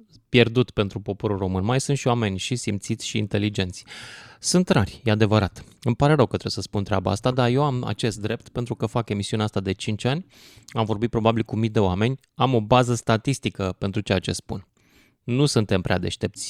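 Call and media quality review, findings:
No faults found in the speech recording. Nothing to escalate; ticket can be closed.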